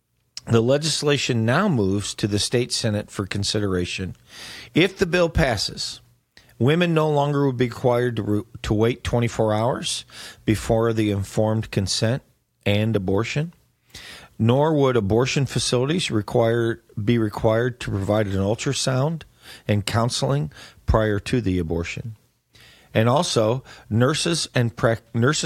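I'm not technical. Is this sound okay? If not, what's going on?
Yes, this recording sounds fine, with no technical problems to point out. It's speech throughout, and nothing in it jumps, cuts out or sounds damaged.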